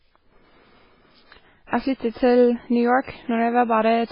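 MP3 compression runs throughout the speech, heavily damaged, with nothing above 5.3 kHz. The sound is likely the work of an MP3 encoder starved of bits, at a level that fits roughly 16 kbps. Short of data, the encoder cut the treble at that fixed point and discarded weaker frequency lines, which flicker in and out between frames. The result is dull, watery and swirling, with metallic chirps on sibilants and consonant onsets softened.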